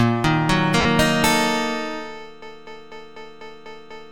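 At 0.81 s there is a gap of lost LE Audio frames, lasting 40 ms, to 0.85 s. That fits four 10 ms frames going missing over the Bluetooth LE Audio link. The LC3 decoder filled the hole by reusing the last good spectrum with random signs. It then faded that copy as the loss went on. The result is a short, noisy smear in place of the real audio. The sound returns right after.

From 2.42 s to the end of the clip there is a broken-record loop. A 247 ms fragment repeats exactly, back to back, seven times. The pattern has a fixed, mechanical rhythm. The cause is likely a stall in the player, encoder or stream, which kept sending the last piece it held. Whatever should have played in those final seconds is lost. The light lossy compression on the clip is separate from both faults.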